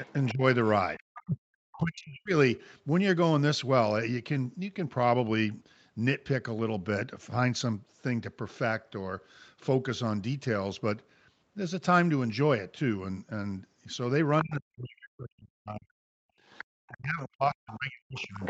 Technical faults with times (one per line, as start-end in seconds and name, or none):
0.05-1.79 other side's voice leaking through
0.32-2.33 speech suppressed in double talk
14.42-18.50 speech suppressed in double talk
16.34-16.40 background gated by the echo canceller
16.53-18.50 other side's voice leaking through